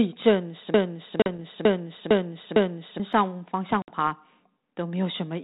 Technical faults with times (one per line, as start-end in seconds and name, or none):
0.74-3.00 broken-record loop
1.22-1.39 packet loss on an ADPCM call
3.82-3.89 packet loss on an ADPCM call